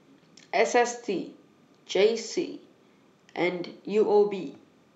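Timecode bleed runs throughout the speech, from start to finish. Linear timecode from a neighbouring line has leaked in, its square wave flipping between roughly 1 kHz and 2 kHz. The result is a faint, steady chirping warble sitting far beneath the voice, its rhythm consistent with 29.97 frames-per-second code.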